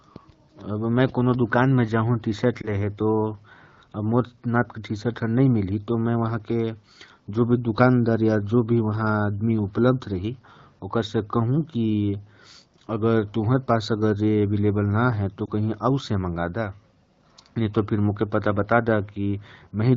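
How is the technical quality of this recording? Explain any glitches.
Two short glitches interrupt the speech, both lost AMR speech frames. The wideband coding itself stays clear, with only light colouring that fits AMR-WB at around 12.65 kbit/s.

Lost AMR speech frames occur at 2.61–2.70 s and 15.45–15.49 s. Each time, radio errors corrupted one frame, so the decoder bridged the 20 ms gap by reusing the last good pitch and vocal tract settings at lowered gain. This is heard as a brief dip or warble.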